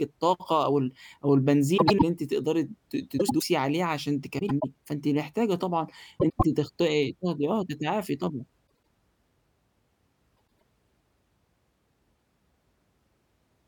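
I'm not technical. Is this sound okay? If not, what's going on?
No. The speech has a fault called frames out of order. Two short neighbouring pieces of the audio play in swapped order, so a brief stretch sounds garbled and fluttery. Nothing is missing. It is just scrambled. This happens at 1.77, 3.18, 4.39, 6.19, 8.68 and 10.37 seconds. Each lasts about a quarter of a second. At 8.68 seconds it is a little shorter.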